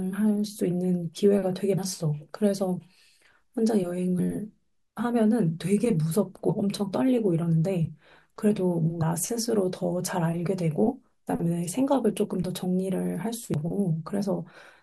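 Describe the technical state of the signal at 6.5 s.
At 6.48 s there is damaged data in the compressed stream. The decoder misreads corrupted frames and loses sync, producing a brief glitch in the speech.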